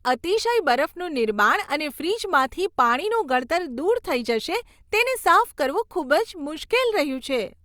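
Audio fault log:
Nothing stood out on listening to this speech recording.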